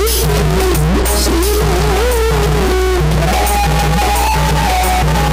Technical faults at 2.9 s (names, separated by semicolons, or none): mains hum